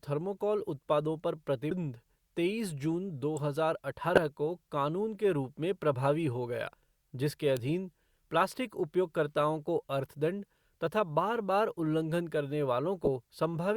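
Damaged data in a compressed stream first appears at 1.71 s, right after "थर्माकोल उत्पादों पर". Some bytes in the encoded stream are wrong there, so the decoder misreads that frame, loses its place and jumps ahead to the next frame header it can find. The result is a brief blip in the speech.

An electrical switching spike follows at 3.37 s. It is a sharp snap laid over the speech, most likely a nearby switch or discharge arcing into the audio line.

The stream damage returns from 4.15 to 4.18 s as a short glitch lasting about 28 ms. It appears again at 6.74 s, just after "में प्रभावी हो गया", as another quick blip where the decoder resyncs.

A second electrical switching spike, likely from the same kind of arc, snaps at 7.57 s, after "प्रभावी हो गया जिसके".

The last corrupted stretch, from 13.05 to 13.08 s, produces a glitch where the damaged frames break up.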